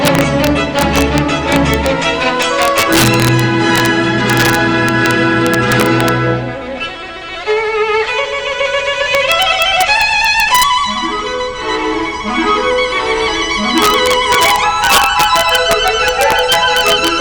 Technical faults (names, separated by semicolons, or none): integer overflow